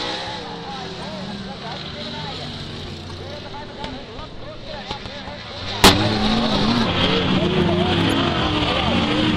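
From 0 to 6.86 s the audio runs at the wrong speed. It plays 1.21 times too fast, so pitch rises by about three semitones along with the tempo. Everything sounds high and hurried. The likely cause is playback or editing against the wrong clock. At 6.86 s normal speed and pitch return abruptly.

Inside that section, at 1.02 s, a corrupt frame is decoded. It gives a faint blip, peaking around -35 dBFS. Flipped bits in one compressed frame made the decoder misplace energy in frequency.

At 3.08 to 3.13 s a louder burst follows, near -20 dBFS. It lasts about 50 ms, which fits a few consecutive damaged frames. It sounds like a short squeaky chirp.

At 8.10 s, after normal speed has returned, another corrupt frame is decoded. It is a brief click-like blip, again near -20 dBFS, consistent with a single bad frame.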